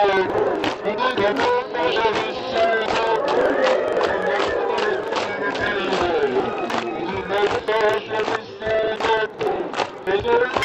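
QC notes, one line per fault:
Throughout: interleaved audio read as planar. Each block's alternating left-right samples are split in half and treated as separate channels, so both halves play at half speed. The sound drops an octave, doubled and choppy, stuttering every 42.7 ms (23.4 Hz), which fits 2048-sample blocks.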